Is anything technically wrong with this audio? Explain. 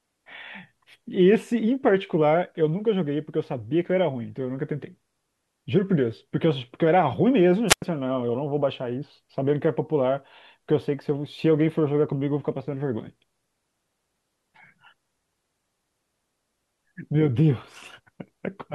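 Yes. From 7.68 to 7.82 s there is a wireless microphone squelch dropout: the radio link from the analogue FM transmitter fades and the receiver's squelch cuts the output. The speech gives way to a brief burst of hiss, then about 94 ms of near silence before it returns.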